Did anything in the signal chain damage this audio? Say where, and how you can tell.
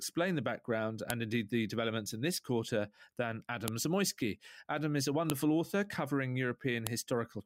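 Yes. Four sharp clicks at about 1.10 s, 3.68 s (after "in this quarter than"), 5.30 s (between "is a" and "author covering") and 6.87 s (after "author covering") show a file header played as audio. This is a storage or concatenation fault: separate WAV pieces were joined without stripping their headers, so a few dozen bytes of header data play as samples. Each click is a single instant, loud regardless of the surrounding level, which distinguishes it from dropout clicks or clipping.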